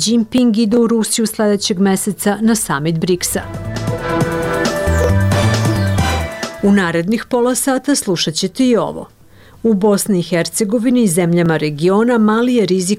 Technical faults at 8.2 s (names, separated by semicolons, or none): none